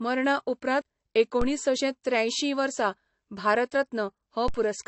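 From the start to the end, the speech has nothing above 8.1 kHz. The top is sharply cut, and the speech sounds dull and smeared. The file is saved as MP3 at a generous rate, yet the damage sounds older than that. This is most likely low-bitrate audio saved at a high bitrate. The sound points to an earlier pass through a lean AAC encoder, around 32 kbit/s. The later MP3 encoding kept its cut-off and artefacts. It could not bring back what was lost.

At 1.42 s there is a DC step. The waveform's zero line suddenly jumps to a new level. A high-pass filter near 5 Hz then pulls it back to centre over a short time. The jump is heard as a low thump. The speech carries on unchanged through it.

A second DC step comes at 4.48 s. It behaves the same way: a sudden offset, the same low thump, then a quick decay back to zero.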